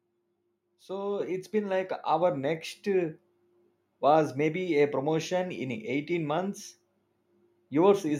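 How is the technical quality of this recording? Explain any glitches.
The recording has one glitch: a microphone volume step-up at 1.2 s. At that instant the level of the speech and the background noise rises together by about 5 dB, all at once rather than gradually. The cause is the call software's automatic gain control judging the microphone input too quiet and raising the device's input volume in a single jump. Because the change happens before the signal reaches any processing, everything the microphone picks up gets louder together.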